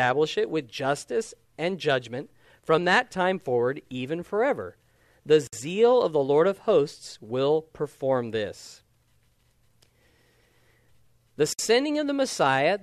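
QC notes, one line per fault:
5.47–5.53 s and 11.53–11.59 s, gap at a join of encoded pieces: speech breaks into silence for 57 ms, then 60 ms, 6 s apart, with smeared edges before resuming where it stopped. The pieces were encoded separately and joined untrimmed, keeping each one's start delay and final-frame padding.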